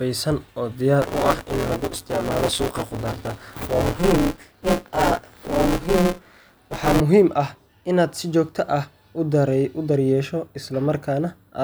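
It's a speech clip with buffer tearing from 1.02 to 7.00 s: a steady robotic buzz at 172 Hz, which fits a 256-sample buffer. The writer and reader have slipped, so roughly a third of each period replays audio from about 20 ms earlier, with hard joins.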